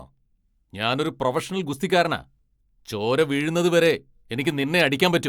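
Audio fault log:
No fault appears in this speech audio fault log.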